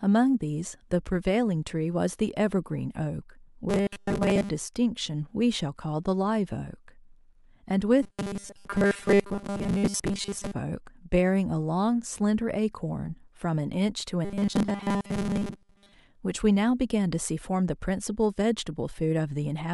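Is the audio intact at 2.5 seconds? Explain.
Yes, at 2.5 seconds the speech plays through intact, with no dropout, click, distortion or other audible fault at that moment.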